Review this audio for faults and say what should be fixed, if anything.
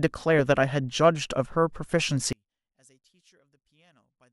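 From 2.33 s to the end at 4.32 s, the speech drops by about 38 dB and nearly disappears. What remains is a faint trace. The likely cause is one channel inverted. With one stereo side in reversed polarity, the centred voice cancels when the two sides are summed to mono. Only the small difference between them survives. Fix it by flipping that channel's polarity back. To prevent it, check polarity and mono compatibility on every stereo file before delivery.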